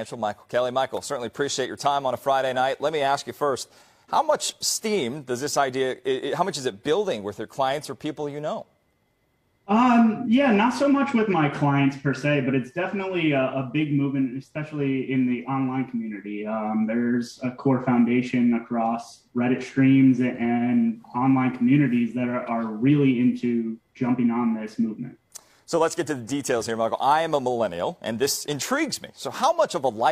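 Nothing here calls for comment, since the audio runs along without any technical trouble worth pointing out.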